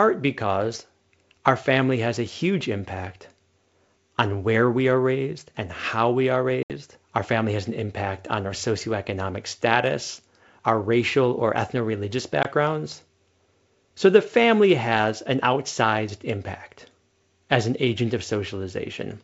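Around 6.63 to 6.71 s there's packet loss on an ADPCM call: about 70 ms drops out as a hard-edged silent hole, which fits a handful of packets going missing. The decoder's predictor and step size lose track of the sender's, so the speech comes back with a touch of distortion before settling. At 12.43 to 12.45 s a shorter 20 ms gap, likely a couple of packets, does the same on a smaller scale.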